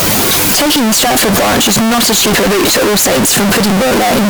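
From start to finish the speech is extremely loud and harsh, pressed into a near-square wave at an almost fixed, high level, with background noise as loud as the talker. This float read as integer fault likely comes from 32-bit float samples being interpreted as 32-bit integers.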